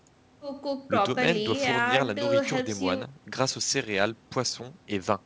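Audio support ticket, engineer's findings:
No faults found in clip.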